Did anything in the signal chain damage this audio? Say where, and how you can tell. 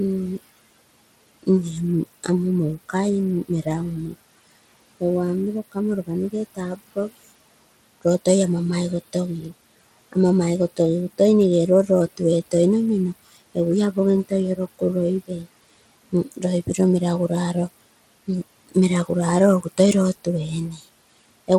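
Yes. At the codec stage, a gritty grain runs throughout with nothing above 18.6 kHz, likely Bluetooth SBC compression at a low bitrate such as 96 kbps. A spectrogram shows a hard ceiling and speckled upper bands.

In call processing, speech was cut by the noise suppressor at 15.28–15.47 s and 16.12–16.44 s, dipping about 14 and 11 dB. The waveform shows short notches sinking toward the room noise about 20 dB below.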